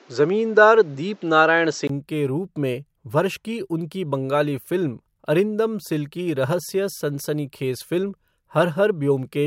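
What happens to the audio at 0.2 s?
At 0.2 s the speech sits on a poorer input, likely an input switched to a poorer device, lasting from the start to 1.89 s. Nothing is passed above 7.7 kHz, so the sound is duller, with a level shift of roughly 5 dB and added background noise. A 20 ms silence marks the switch back, just before "के रूप में वर्ष".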